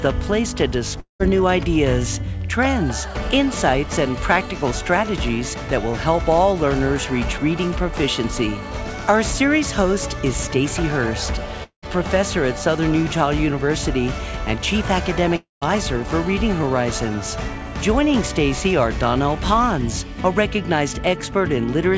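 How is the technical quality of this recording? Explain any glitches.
The recording has three gaps that sound like a long network dropout, at 1.00 to 1.21 s, 11.63 to 11.89 s and 15.36 to 15.63 s. Each time, the last sound carries on as a fading buzz before roughly a tenth of a second or more of silence, and the audio resumes with about 200, 200 and 260 ms missing. The likely cause is a stretch where no packets arrived, so the receiver extended the final sound and then gave up. A brief concealed packet loss would only smear a few tens of milliseconds; here the fill decays into outright silence. The audio also carries nothing above 8 kHz, which fits a G.722 call path at 64 kbps.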